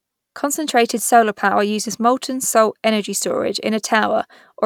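Nothing in the speech stood out as a technical problem on listening.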